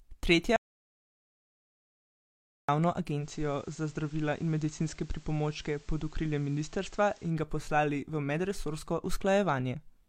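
At 0.56 s the speech cuts off into silence until 2.69 s, a 2.12 s audio dropout to silence, likely from lost input while recording continued. Unlike a fade or noise gate, no room tone or noise floor survives; that stretch is simply gone.

From 3.15 s to 7.37 s, starting just before "ga poslali v medresorsko", the sound shows digital radio blending to analogue FM. A 160 ms cross-fade brings in hiss roughly 30 dB down and a level about 1 dB lower. The rising hiss separates this from plain filtering.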